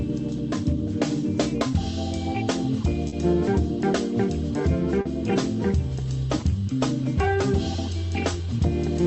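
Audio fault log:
0.37–0.39 s, 1.71–1.73 s, 3.08–3.13 s, 5.01–5.06 s: short concealed packet loss, with 10 ms gaps in the first two and 40 ms gaps in the last two. The decoder extended the preceding sound to cover each gap, so each one is heard as a brief smear or wobble. On a spectrogram each shows as a short, unnaturally steady or repeated patch. On the waveform the fill continues briefly before blending back into the real audio.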